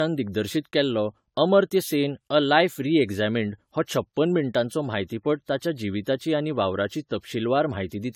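Throughout, the speech sounds swirly, hollow and smeared, with blurred attacks. That's likely generation loss, from something like fifteen re-encodes through what sounds like AAC-LC at 96 kbit/s.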